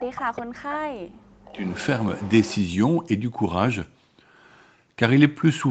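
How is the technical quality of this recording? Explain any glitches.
The recording has two call-related faults, both in the first three seconds of this speech clip, heard over a call-style band that stops at 8 kHz.

Speech suppressed in double talk, from 0.0 to 1.65 s: the level sinks, by as much as about 40 dB, across roughly one and a half seconds. This is likely an echo canceller ducking the near talker while the far side spoke.

Echo leak, at 1.46 to 1.86 s and 2.16 to 2.6 s: a faint delayed copy trails the speech by about 0.4 s, roughly 20 to 25 dB down. It is likely loudspeaker pickup that the canceller failed to remove.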